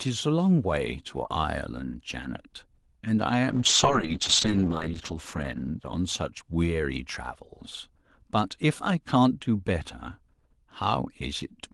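From 3.51 to 6.77 s the speech suffers a call bitrate drop. The Opus encoder's rate falls from 32 kbps to 8 kbps and bottoms out for 1.45 s, so coding turns coarse and rough. Unlike packet loss, nothing cuts out; the texture degrades steadily, then recovers.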